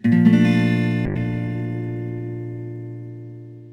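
A call bitrate drop begins at 1.06 s and lasts to the end of the clip. The connection's bandwidth estimate collapsed, forcing the encoder down from a rate that sounds like around 96 kbps to something near 15 kbps. The sound loses its top end and turns muffled, with a rough, watery coarseness as the coding is quantised much more crudely. It stays at its worst for about a second and never recovers to its earlier clarity.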